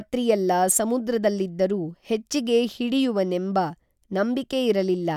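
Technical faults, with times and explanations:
No technical faults can be heard in this speech.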